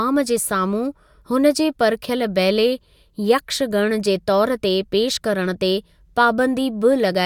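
No technical faults are audible.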